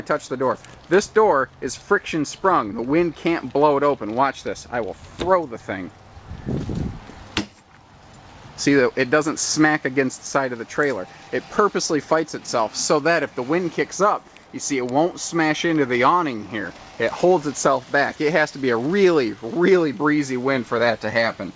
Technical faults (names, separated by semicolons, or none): none